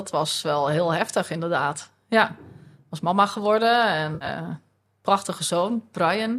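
Speech, with AAC frame loss with concealment between 4.15 and 4.29 s: about 80 ms of frames dropped across a 140 ms stretch, the longest run around 70 ms. The decoder rebuilt the gaps from the last good spectrum, which leaves a smeared, noisy, phasey patch there. A light graininess throughout points to the likely low-delay AAC compression carrying the audio.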